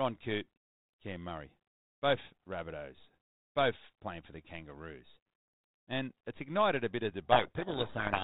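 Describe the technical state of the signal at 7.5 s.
At 7.5 s a codec payload misread is under way, from 7.32 s after "ignited a bit of" to the end: G.726 code words are unpacked in the wrong bit order, burying speech in harsh distortion that starts abruptly, unlike the steady, level-following hiss of low-bitrate G.726.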